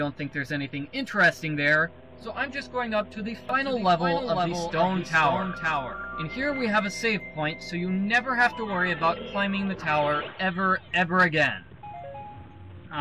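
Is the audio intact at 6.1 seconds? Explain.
No. A doubled audio track runs from 3.49 to 6.63 s, likely a second, slower capture path, adding a dry copy about half a second late and about 5 dB quieter.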